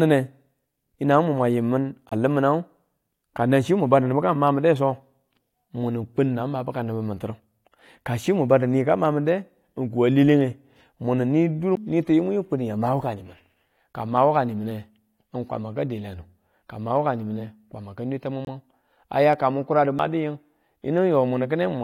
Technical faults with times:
2.09-2.13 corrupt frame muted
11.75 CD skip
18.45-18.48 corrupt frame muted
19.99 CD skip

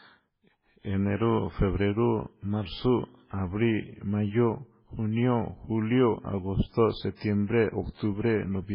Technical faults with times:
0.00-8.74 MP3 compression

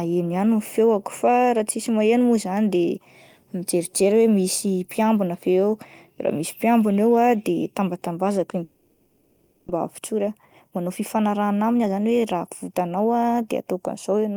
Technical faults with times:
8.63-9.70 long network dropout
9.78-13.64 jitter buffer speed-up

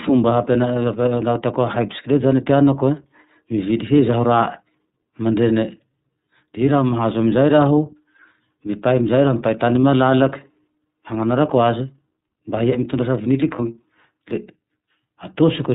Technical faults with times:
0.00-15.75 iLBC codec
9.81-9.84 lost iLBC frames
13.56-13.60 lost iLBC frames

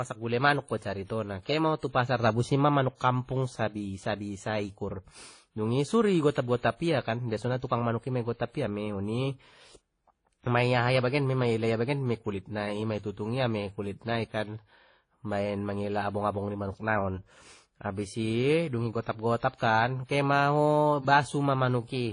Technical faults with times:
0.00-22.12 transcoding between lossy codecs

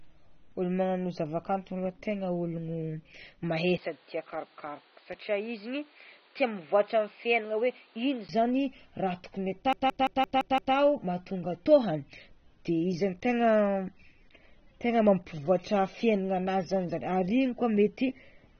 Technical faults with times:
0.00-18.59 AAC compression
3.78-8.29 input switched to a poorer device
9.73-10.75 system hang loop

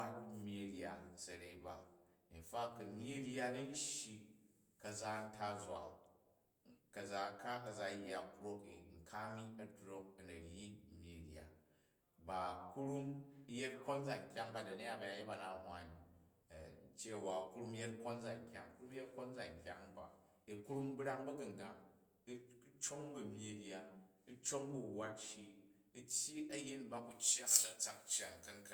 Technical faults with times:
27.11-28.74 pre-emphasis left on

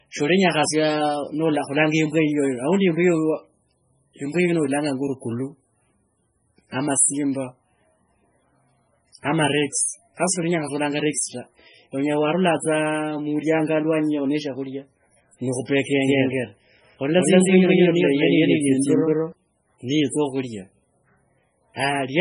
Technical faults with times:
0.00-22.20 MP3 compression
9.72 pre-echo
16.04-19.32 doubled audio track

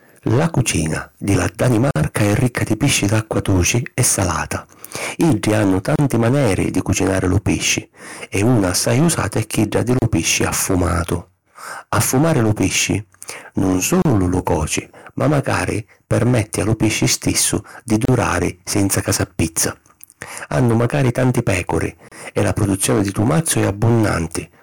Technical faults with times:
0.00-24.63 hard clipping
1.91-1.96 gap at a join of encoded pieces
5.96-5.99 gap at a join of encoded pieces
9.99-10.02 gap at a join of encoded pieces
14.02-14.05 gap at a join of encoded pieces
18.05-18.08 gap at a join of encoded pieces
22.08-22.12 gap at a join of encoded pieces

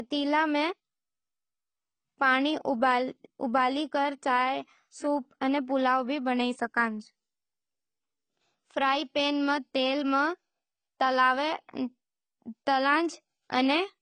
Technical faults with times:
0.00-14.01 AAC compression

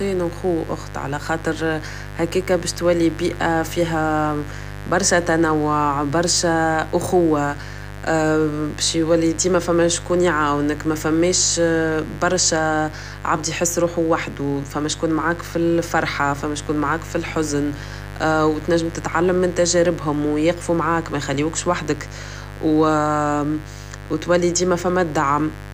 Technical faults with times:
0.00-25.73 mains buzz

